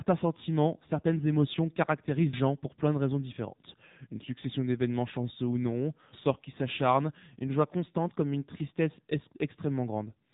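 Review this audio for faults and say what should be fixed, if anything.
The speech has gone through the AMR narrowband mobile codec the whole way. Nothing above 3.8 kHz survives, and the vocal-tract model running on so few bits leaves plainly audible buzzy, synthetic damage, which fits a low mode around 7.4 kbps. To prevent it, capture or route the audio over a wideband path instead of a narrowband phone leg.

At about 2.33 s there's a skip where about a fifth of a second of audio vanishes and the two sides butt straight together. That's likely audio missing between chunks, with a piece dropped while one roughly 4 s block closed and the next opened. To prevent it, use overlapping or double-buffered chunk handling so nothing is lost at the handover.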